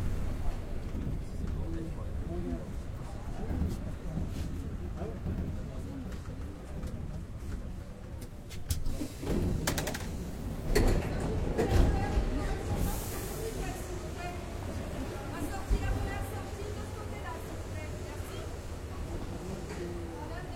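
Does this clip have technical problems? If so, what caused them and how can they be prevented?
Yes. Compressed frames skipped around 8.18 to 8.23 s: the audio jumps ahead by roughly 300 ms, about seven 46 ms codec frames. Prevent this by checking file integrity after transfer and re-encoding or re-copying from an undamaged source.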